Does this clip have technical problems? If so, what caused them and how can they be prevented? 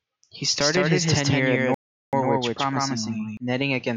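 Yes. A doubled audio track runs from 0.61 to 3.37 s: a second copy at roughly equal level trails by about 150 ms, likely from a duplicate capture path. Route each source through a single capture path and monitor for duplicate inputs.

A playback stall silences the speech from 1.74 to 2.13 s, about 385 ms, likely from a data underrun or blocked player thread. Use larger playback buffers and keep the audio thread free of blocking work.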